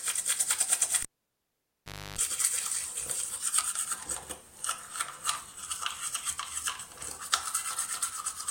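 At 1.03 s a cable is pulled and plugged in while live: a pop, about 1.11 s of near silence, then roughly 0.30 s of 50 Hz mains buzz as the tip touches, and a second pop at 2.19 s. Spectrogram shows vertical clicks bracketing a gap and harmonic hum lines.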